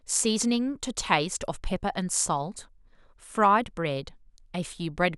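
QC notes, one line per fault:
0.83 s and 3.44 s, dropped samples: a single sharp click at each time, with nothing audibly missing from the speech around it. The likely cause is the loss of roughly one sample, so the waveform jumps straight to a later value and the step shows as a thin vertical line across the spectrum. Unlike a dropout, there is no audible gap or silence, and unlike crackle, the clicks are isolated rather than continuous.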